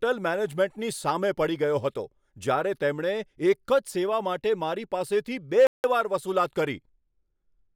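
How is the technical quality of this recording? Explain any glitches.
There is one glitch in this speech recording. From 5.67 to 5.84 s, a playback stall silences the sound mid-flow for 171 ms before it resumes. The player likely starved of data or its thread was blocked.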